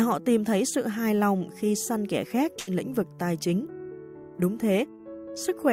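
At 2.59 to 2.70 s, a burst of packet loss leaves about 80 ms missing. The receiver stretches the last sound for about 77 ms, fading it, then jumps ahead.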